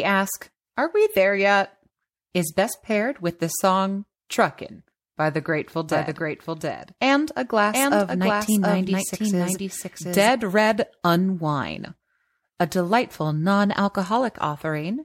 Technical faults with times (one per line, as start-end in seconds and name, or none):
5.91-10.31 doubled audio track